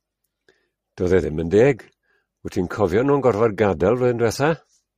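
A short speech recording with no technical faults to be heard anywhere in the signal.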